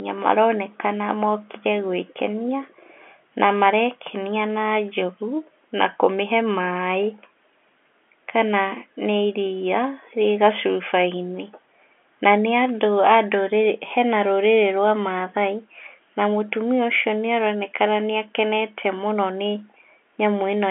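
Nothing in this speech recording points to a technical fault. The sound has the narrow character of G.711 mu-law telephone coding, held to the 300 Hz to 3.4 kHz line band with nothing above 3.8 kHz.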